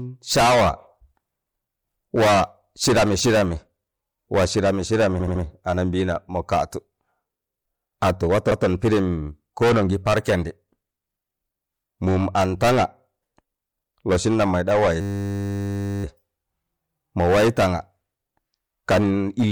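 At 5.19 s the speech stutters with repeated frames: a 78 ms stretch, which fits about three compressed frames, plays three extra times through 5.42 s, adding about 235 ms. At 8.50 s a longer 157 ms block, roughly six frames, plays once more, ending at 8.66 s. Whole compressed frames were sent more than once, so each repeat is a stretch of the speech itself, unlike a tight loop.

From 15.01 s to 16.04 s comes a system hang loop. The machine froze while the sound hardware kept replaying one 10 ms buffer about a hundred times, giving a steady 100 Hz buzz. That tiny loop length sets it apart from the repeated frames. Those earlier repeats lasted tens of milliseconds or more and stayed audible as fragments of the speech.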